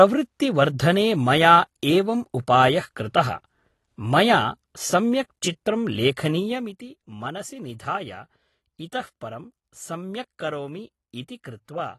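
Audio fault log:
Throughout: AAC compression. The speech sounds dull and smeared, with plainly audible coding damage and nothing above 12.1 kHz. The likely cause is AAC-LC coding at a low bitrate, fitting about 32 kbps, which lowers the cut-off and quantises the spectrum coarsely against a hearing model.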